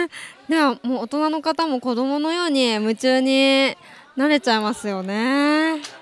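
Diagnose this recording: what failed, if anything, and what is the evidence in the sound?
Nothing stood out on listening; no stage of the chain gives itself away in the sound.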